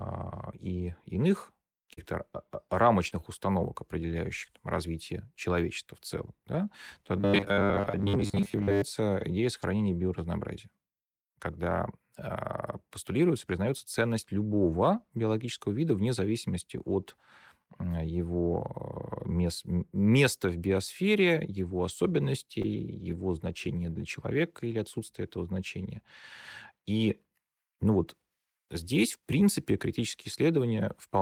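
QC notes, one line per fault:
1.93–1.99 s, short concealed packet loss: about 40 ms of speech right after "и иных" failed to arrive in time. The decoder extended the preceding sound to fill the gap and then crossfaded back, leaving a brief smear. The last 20 ms of that gap, at 1.97 s, is covered by a lost packet rebuilt from error correction, which sounds rougher.
3.08–3.13 s, short concealed packet loss: about 40 ms is missing just before "установок определяющих там развитие". It is patched by continuing the previous sound, which produces a short wobble. The final 20 ms, at 3.11 s, is an error-correction rebuild and is grainier.
7.17–8.82 s, robotic sound from repeated short buffers: a rigid, metallic buzz at 100 Hz sits over most of this stretch while the speech contour still roughly comes through. The likely cause is the playback side looping the last 10 ms of audio whenever new data arrives late.
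9.20, 9.44, 9.62 s, lost packet rebuilt from error correction: each is a single 20 ms packet replayed from the low-bitrate copy carried in the next packet. There is no gap, but these frames sound briefly noisier.
21.88–24.72 s, lost packet rebuilt from error correction: eight isolated 20 ms rebuilds, at 21.88, 22.64, 22.72, 23.00, 23.10, 23.40, 24.66 and 24.72 s. Each produces a momentary roughness where the reduced-quality redundant copy stands in for the lost frame.
22.62–22.66 s, short concealed packet loss: about 20 ms is missing and mostly filled by extrapolation, giving a brief smear. It overlaps the error-correction rebuild at 22.64 s.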